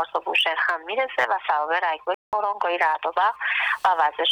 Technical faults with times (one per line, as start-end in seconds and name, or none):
2.14-2.33 playback stall